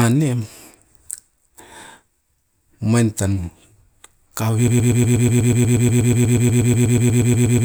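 From 4.68 s to the end of the clip, the playback chain most likely stalled and kept resending the last fragment it held, producing a broken-record loop. A slice of speech about 121 ms long repeats exactly, back to back, 25 times, turning into a rapid stutter with a fixed rhythm of roughly eight repeats per second. The speech that should have followed is gone, and the loop never releases.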